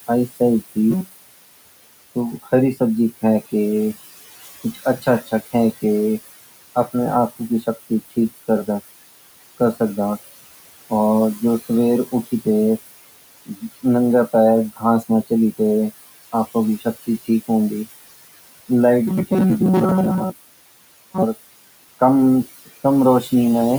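It's a speech clip with room noise sitting about 15 dB under the talker, and a noise suppressor working on it the whole way through. You can hear noise suppressor artifacts throughout: the background gets pulled down by about 18 dB in the gaps and then comes back up under the speech, with the gain changing band by band from one frame to the next. That same processing also causes speech cut by the noise suppressor in three places, where it mistakes parts of the talker for noise. Between 4.64 and 5.54 s, bits adding up to about a fifth of a second drop by as much as about 15 dB. Between 7.3 and 7.91 s roughly a tenth of a second goes soft by up to about 12 dB, and from 13.46 to 13.63 s a short piece dips by about 15 dB. In each spot the affected parts of the speech come across swallowed or faint. From about 19.1 to 21.2 s there's robotic sound from repeated short buffers, a stiff metallic buzz at 188 Hz that still roughly tracks the speech. 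That pitch fits a chunk of about 5.3 ms being played over and over, most likely because new audio was arriving late and the gap was filled by repeating the last buffer, which covers most of that stretch.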